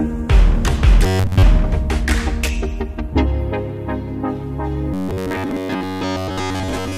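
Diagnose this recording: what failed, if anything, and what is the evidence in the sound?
Robotic sound from repeated short buffers at 1.07 to 1.43 s and 4.94 s onward: a rigid 94 Hz buzz, likely a driver buffer looping roughly 11 ms chunks.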